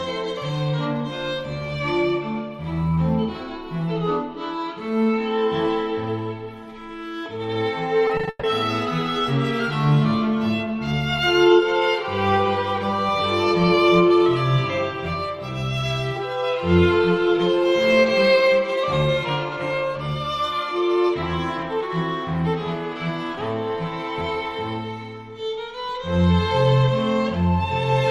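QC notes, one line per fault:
8.07–8.45 s, repeated packet loss (robotic sound): within this span of under half a second, the stream drops out five times in quick succession, with the longest hole about 140 ms. Each hole is patched by extending the last received sound, so about 220 ms, some 58% of the span, is filled-in material rather than real signal, and 220 ms of the original is simply missing. The closely spaced patches make the passage choppy and robotic.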